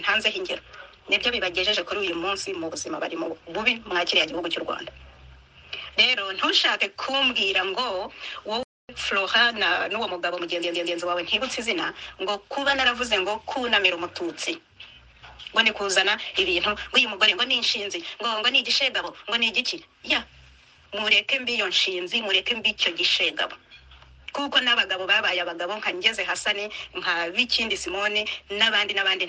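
Throughout the audio there is a watery, swirling quality with dulled treble and smeared attacks, consistent with MP3 compression and most likely an encode at around 64 kbps. At 8.63 s the sound cuts out to silence for 260 ms before resuming at 8.89 s, a playback stall, likely from the player running short of data. From 10.62 s to 10.98 s a 120 ms stretch stutters, playing three extra times. These repeated frames add 360 ms to the audio.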